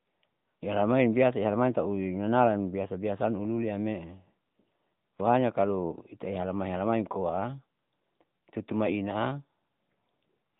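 From start to finish, the speech carries the sound of the AMR narrowband mobile codec. The audio has been squeezed through a phone-style speech coder. It rebuilds each short frame from a vocal-tract model and a few pulses. Nothing above about 3.8 kHz survives, so the speech sounds boxed in and dull. The coding damage is plainly audible, with a buzzy, synthetic edge. That fits a mid-rate mode near 10.2 kbps.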